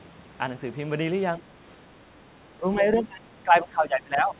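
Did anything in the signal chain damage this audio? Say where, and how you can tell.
Yes. In call processing, the echo canceller likely mistook overlapping far-end talk for echo: speech suppressed in double talk. The speech dips about 10 dB at 1.38–1.45 s, about 15 dB at 2.56–2.82 s, and up to about 20 dB from 3.02 to 4.37 s.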